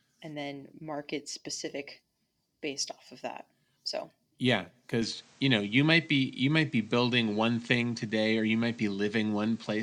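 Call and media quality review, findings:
Input switched to a poorer device, likely: 5.02 s to end, after "of that so yeah". New capture path passes nothing above 9.1 kHz; level shifts about 5 dB; own noise floor about 35 dB below signal. No gap at switchover.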